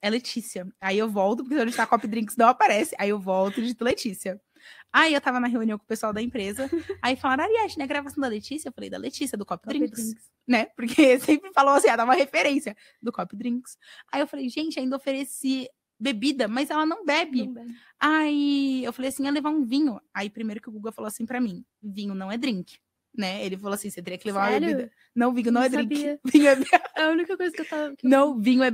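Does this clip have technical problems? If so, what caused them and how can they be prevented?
Yes. A single loud pop sits at 3.91 to 3.94 s, peaking roughly 10 dB above the surrounding sound, which continues underneath. It was likely a brief voltage pulse from a connector, switch or static discharge. Seat cables firmly and ground equipment before recording.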